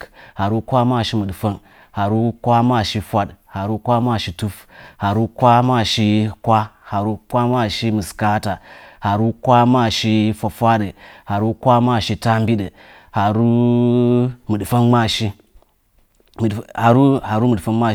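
No technical faults are audible.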